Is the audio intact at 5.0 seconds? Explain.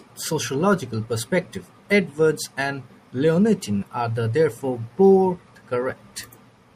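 No. Throughout the speech, including at 5.0 seconds, the audio was likely squeezed by MP3 compression at a rate that fits a 64 kbps encode. The encoder trims the treble and drops weak frequency lines frame by frame, leaving a plainly audible watery, swirling quality.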